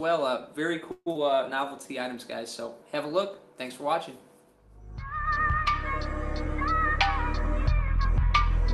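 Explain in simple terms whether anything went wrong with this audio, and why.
Long network dropout, from 0.91 to 1.17 s: audio stopped arriving, likely because of a network interruption. The receiver stretched the last sound into a fading buzz for about 0.23 s, then briefly went silent. About 0.12 s of audio was never played, and the sound resumes past that gap.

Jitter buffer slow-down, from 1.23 to 1.89 s: right after the gap, the receiver needed to rebuild its reserve of audio. It repeated tiny slices of sound many times, adding about 0.1 s, so this stretch plays at 87% speed with the pitch unchanged and sounds drawn out.

Jitter buffer speed-up, from 6.44 s to the end: now too much audio had piled up waiting to play. The receiver trimmed away very short pieces, roughly a tenth of a second in total, so the sound runs at 104% speed with the pitch unchanged.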